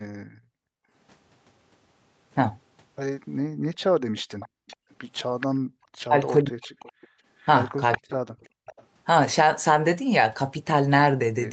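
From 0.23 to 0.91 s the room background is gated by the echo canceller: it dips by up to about 40 dB for most of that stretch while the far end plays, then returns. Only the ambience drops, not the talker, which sets it apart from double-talk suppression. The same gating recurs from 4.29 to 5.78 s, roughly half a second in total, and briefly at 7.13 s by about 33 dB.

From 3.62 to 5.47 s and again from 6.62 to 8.84 s, a faint copy of the speech trails the original by 424 ms, around 15 dB down. This is likely an echo leak, with loudspeaker sound getting past an echo canceller. It is a separate delayed voice, not room reverberation.

At 6.06 to 6.85 s and 7.98 to 8.71 s, the talker's speech dips, dropping by as much as about 40 dB, while the other side is talking. This is likely speech suppressed in double talk. Here the foreground voice itself is turned down, not just the background.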